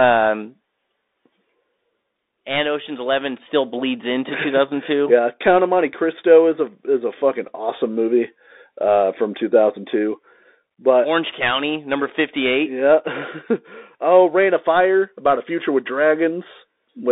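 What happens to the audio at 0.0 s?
From the very start, and for the whole clip, the speech comes through a Bluetooth CVSD headset codec: the band sits between about 250 Hz and 3.7 kHz, s sounds are scratchy, and a granular hiss rides underneath. That hiss and slope distortion on loud high sounds, where the one-bit up-down steps can't keep pace (a 64 kbps stream would fit), set it apart from plain telephone band-limiting.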